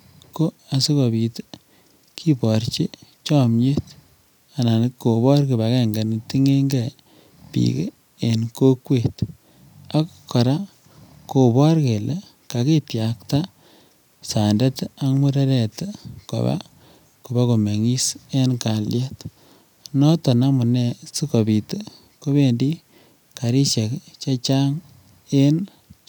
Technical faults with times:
none

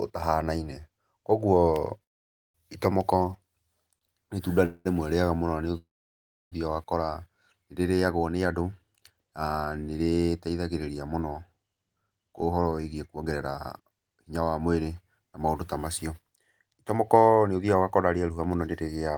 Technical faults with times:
2.03-2.56 call audio freeze
3.98-4.03 short stall from a late packet
4.65-4.87 call audio freeze
5.77-6.54 call audio freeze
11.75-19.10 jitter buffer speed-up

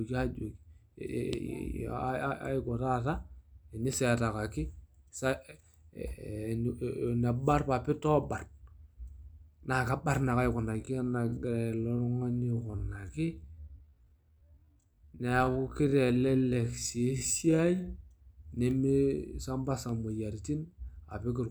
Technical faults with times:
10.70-17.88 time-stretched section

